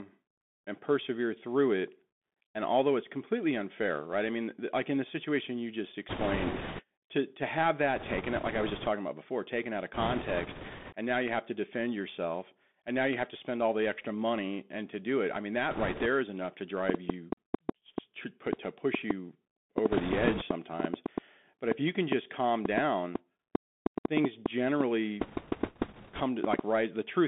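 Across the whole recording the speech sounds boxed-in and thin, with a granular hiss underneath and scratchy s sounds. That is the Bluetooth CVSD headset codec. Its one-bit adaptive stepping, which fits a 64 kbps link, cannot follow fast loud detail, and the line passes only about 200 Hz to 3.5 kHz.

Bursts of rushing, crackly noise cover the speech at 6.09–6.83 s, 7.96–8.88 s, 9.94–10.95 s, 15.71–16.06 s, 19.92–20.43 s and 25.21–26.22 s. These are bit errors on a Bluetooth voice link. Flipped bits push the decoder's steps the wrong way. The first burst is the roughest, at around one bit in ten, and the others run lower, at about 4 to 7 percent.

From 16.9 s to 26.6 s an irregular train of clicks ticks over the sound and the pauses. About four clicks arrive each second, some forty in all, peaking about 15 dB above the signal. Interference from nearby equipment or a faulty connection or power supply is the likely cause.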